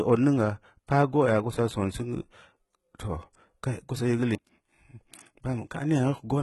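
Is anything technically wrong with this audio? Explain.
Yes. Throughout the clip, the speech shows the marks of heavy HE-AAC compression, the likely cause. This codec encodes only the lower spectrum and synthesises the treble by copying lower bands upward under a coarse envelope, so the upper harmonics don't align with those below the crossover. Here the s sounds come out gritty, metallic or lispy, and nothing remains above 11.8 kHz. The damage points to a very low bitrate, around 16 kbps.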